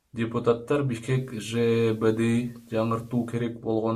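At 0.88 s the speech shows digital radio blending to analogue: the receiver lost its digital stream and cross-faded over about 390 ms to the station's FM broadcast. Faint hiss, roughly 40 dB below the speech, rises, and the level shifts by about 2 dB. At 3.59 s it blends back. Unlike a dropout or codec glitch, nothing cuts out; the gradual cross-fade and the arrival and departure of FM hiss mark it as a source switch.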